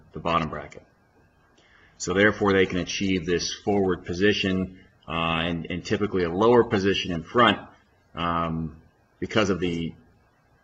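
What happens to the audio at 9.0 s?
Nothing goes wrong at 9.0 s; the audio plays through that moment intact, with no dropout, click or other fault to be heard.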